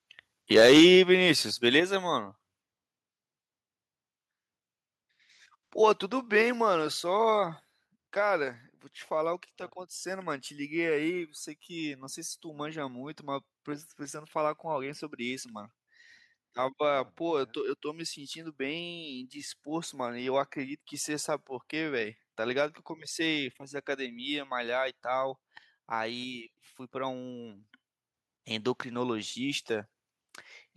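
Speech opens with a harsh, crackly edge from 0.53 to 0.95 s, where the loudest peaks sound flattened. That is microphone overload, likely from the input volume being set high enough to drive peaks about 7 dB past the converter's limit, so roughly one sample in twenty has its top sliced off. The level of both voice and background then drops suddenly three times, at 0.80 s by about 2 dB, at 1.80 s by about 5 dB and at 6.42 s by about 4 dB. Each is a microphone volume stepped down, likely the call software finding the microphone too loud or clipping and cutting the device's input gain in single jumps. Near the end, at 28.14 s, voice and background jump up together by about 4 dB, a microphone volume stepped up where the software judged the input too quiet and raised the gain in one step.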